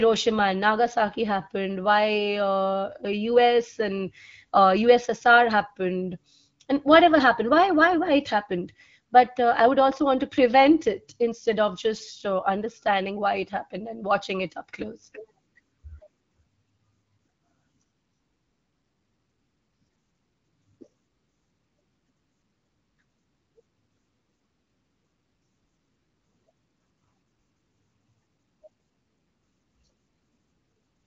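No technical faults can be heard in this recording.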